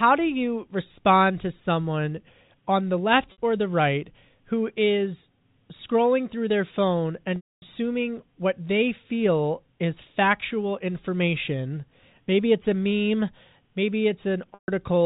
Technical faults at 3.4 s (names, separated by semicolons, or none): packet loss with pitch repetition